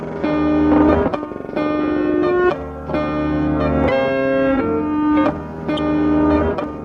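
Damaged data in the compressed stream hits the music twice, at 0.85 to 0.89 s and 5.75 to 5.79 s. Corrupted bytes make the decoder misread frames and lose sync until it finds the next frame header, leaving a brief chirp or blip each time.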